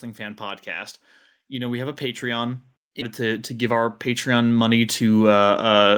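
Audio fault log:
0.05–5.93 s, automatic gain rising: the level of the speech and the background climbs together, by about 15 dB over nearly the whole clip, as the gain control keeps raising the gain on an input it judges too quiet. The rise is gradual, with no sudden step.
3.01–3.03 s, skip ahead: about a second of speech is missing, and the audio on either side is joined directly with no silence or fill. Later audio was already queued when this stretch was dropped. Unlike a dropout, there is no hole, only a jump forward.
3.21–4.76 s, jitter buffer speed-up: the speech runs at about 107% speed, which sounds hurried, while its pitch stays the same. The receiver cut many tiny pitch-period pieces, about a tenth of a second in total, to shrink the delay its buffer had built up.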